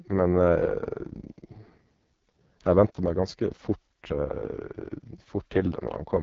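From start to finish this speech runs through the AMR wideband (HD Voice) codec at what sounds like its lowest rate, around 6.6 kbit/s. The vocal tract model is starved of bits, so the voice turns rough and raspy, with shaped noise filling the top and nothing at all above 7.4 kHz.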